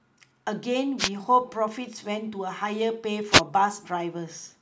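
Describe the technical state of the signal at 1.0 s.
At 1.0 s the signal is caught in a wireless microphone noise hit. It runs from about 0.98 s to 1.09 s, roughly a tenth of a second. The radio link from an analogue FM microphone briefly loses strength as reflected paths cancel the direct one. The receiver's own noise then rises above the weakened carrier. The result is a short swish of static laid over the speech.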